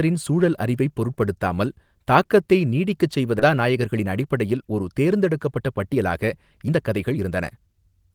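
A couple of samples are likely missing from the stream at 1.24 s and again at 2.69 s, which are dropped samples. With so little gone, nothing audible is removed from the speech. The waveform simply steps from one value to a later one, and each jump is heard as a single sharp click. On a spectrogram it appears as a thin vertical line running up through the spectrum.

Between 3.39 and 3.41 s there is a skip ahead. The playback path discarded a large stretch of buffered audio, about a second and a half, while later audio was already queued. It then jumped straight to that newer material with no fill in between. The delay dropped by the same amount in one step. The speech on either side of the cut is butted together almost directly, so a chunk of the talker's sentence simply vanishes.

From 3.51 s to 8.10 s a jitter buffer speed-up follows. The receiver kept trimming short slices of one or a few pitch periods out of the signal, again and again, to work its backlog down toward target. 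In total it removed roughly 0.7 s. The speech runs at 114% of normal speed while its pitch stays unchanged, so delivery sounds noticeably hurried and compressed for the rest of the clip.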